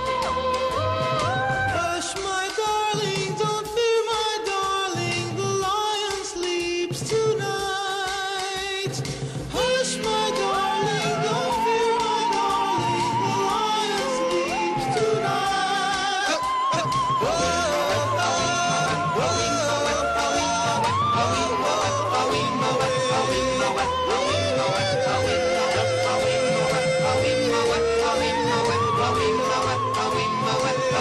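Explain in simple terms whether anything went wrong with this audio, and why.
Nothing went wrong here.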